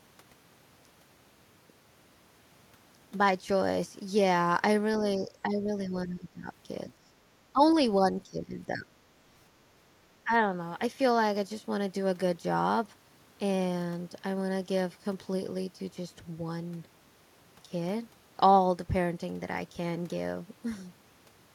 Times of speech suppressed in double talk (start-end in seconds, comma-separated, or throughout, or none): 5.18-6.48, 7.52-7.62, 8.03-9.00, 10.24-10.31